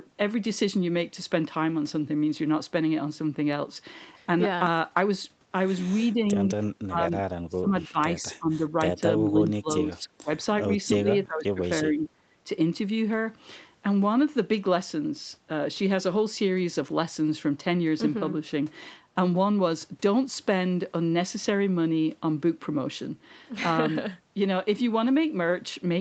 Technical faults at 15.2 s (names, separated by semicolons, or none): none